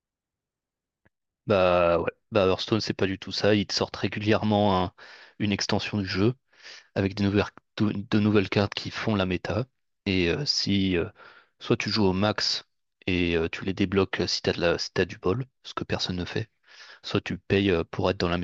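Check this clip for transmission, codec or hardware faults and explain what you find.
No transmission or hardware faults.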